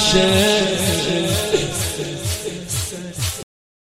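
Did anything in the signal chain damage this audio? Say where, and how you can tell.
Yes: a cut-off end at 3.43 s. The final buffers were never written, so the waveform stops mid-sound into flat digital silence, with no decaying tail on the spectrogram.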